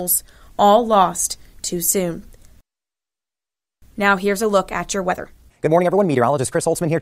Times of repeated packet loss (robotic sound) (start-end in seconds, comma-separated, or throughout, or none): none